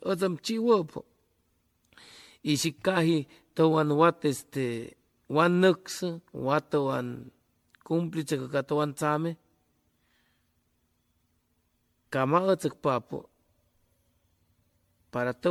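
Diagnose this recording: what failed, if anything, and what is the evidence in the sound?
Generation loss runs through the whole speech clip, a codec-stage fault: swirly, smeared, hollow sound, blurred attacks, nothing above 19.9 kHz. The likely cause is about fifteen MP3 passes near 96 kbit/s, each requantising on a shifted frame grid so noise and spectral holes accumulate.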